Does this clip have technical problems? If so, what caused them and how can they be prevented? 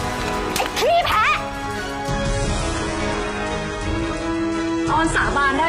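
Yes. From 2.09 s to the end, an adaptive stream at a lower bitrate takes over: treble vanishes above 11.1 kHz and things turn swirly and synthetic, with no gap at the switch. That fits the player dropping from a roughly 96 kbit/s AAC rendition to about 12 kbit/s HE-AAC after the connection slowed. To prevent it, give the stream more buffer and bandwidth headroom, or set a higher bitrate floor in the adaptive ladder.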